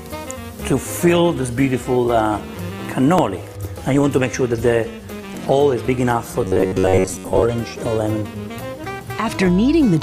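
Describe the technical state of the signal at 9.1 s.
At 9.1 s the signal is intact, with no audible fault.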